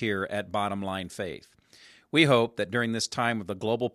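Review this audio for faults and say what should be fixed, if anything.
There's sample clock jitter running through the whole speech clip. The converter's clock is wobbling by something like half a microsecond, so each sample lands a touch early or late, and the error tracks how steeply the waveform is moving. You get a faint grainy hiss, roughly 45 dB under the signal, that comes up on loud and bright passages and drops out in the gaps. Fix it with a cleaner clock or a converter that locks to a stable reference.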